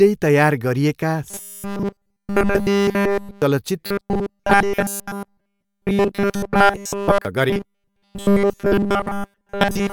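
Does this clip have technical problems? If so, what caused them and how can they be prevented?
Yes. Robotic sound from repeated short buffers occurs at 1.30–3.42 s, 3.86–7.25 s and 7.50–9.93 s. In each span the speech becomes a rigid 200 Hz buzz made almost entirely of repeats. The likely cause is a starved audio path looping roughly the last 5 ms while new audio is skipped. Larger buffers or steadier audio delivery prevent it.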